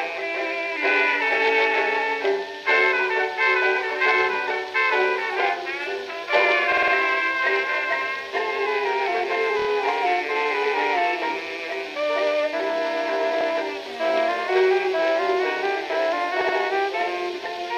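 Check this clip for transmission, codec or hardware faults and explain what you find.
Repeated frames occur four times, heard as short stutters: 6.72–6.93 s (a 52 ms block replayed four extra times), 9.59–9.67 s (26 ms, three extra), 13.40–13.46 s (52 ms, once more) and 16.41–16.56 s (78 ms, twice more). The block lengths fit frames of about 26 ms each. Compressed frames were delivered again, so the decoder replays the identical slice. On a waveform the same shape repeats side by side, and on a spectrogram there are copied patches with thin vertical seams at each join.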